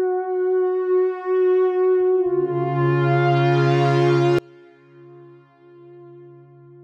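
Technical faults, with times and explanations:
4.39 s to end: audio dropout to a faint residue. The music cuts abruptly to a faint leak about 30 dB down, likely from a live path that lost its source.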